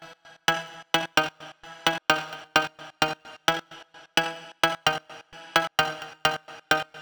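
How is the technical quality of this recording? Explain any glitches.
Nothing here calls for explanation, as no glitches turn up anywhere in this recording.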